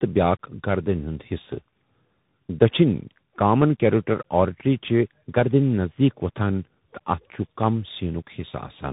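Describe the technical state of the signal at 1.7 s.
At 1.7 s the speech carries tandem speech coding, present across the whole clip rather than at this moment alone. The sound points to two speech coders in a row, a low-rate AMR-NB stage and then CVSD, the later one re-encoding the earlier one's already damaged output. The result is rough, muffled and warbly. A spectrogram shows an empty band above 3.8 kHz and smeared, unsteady harmonics, while the waveform looks grainy rather than cleanly periodic.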